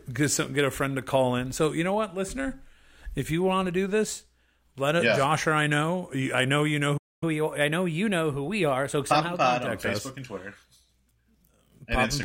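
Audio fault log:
6.97–7.23 s, playback stall: the player likely ran short of buffered data or had its output thread blocked, so nothing reached the output for about 0.24 s. The speech cuts off mid-flow into a brief silence, then picks up again.
7.23–9.67 s, catch-up at higher speed: to win back the lost time, the player resampled its backlog at 1.1 times normal speed, lifting pitch by roughly a semitone and a half. The speech sounds hurried and slightly higher until it returns to normal at 9.67 s.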